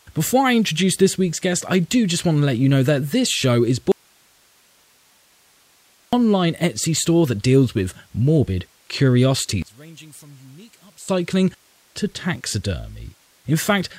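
At 3.92 s, right after "that this show is", an audio dropout to a faint residue cuts the speech abruptly for 2.21 s, leaving only hiss about 40 dB down until 6.13 s. A live but signal-starved path is the likely cause. The waveform collapses to a thin band and the spectrogram shows flat broadband noise.

From 9.62 to 11.09 s the level falls by about 27 dB, leaving a faint trace of the speech. One channel inverted likely causes this, so the centred content cancels when summed to mono. The waveform shrinks sharply and the spectrogram loses most energy.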